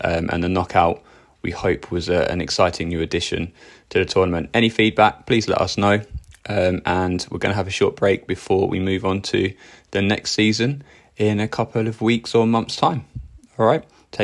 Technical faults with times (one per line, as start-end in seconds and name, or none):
none